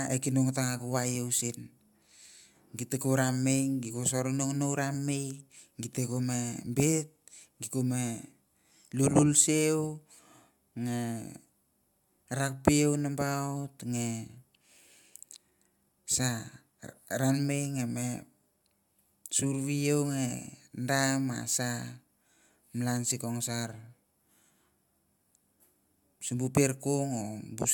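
No technical faults can be heard anywhere in this speech recording. There is nothing in it that needs a time mark or an explanation.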